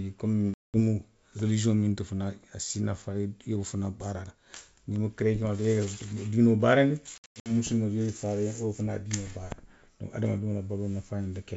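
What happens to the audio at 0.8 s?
Packet loss on the ADPCM call ends just before 0.8 s. About 200 ms of speech, roughly ten packets, drops to hard-edged silence from 0.54 to 0.77 s. The decoder's predictor and step size lose sync, so the speech returns with brief, slight distortion.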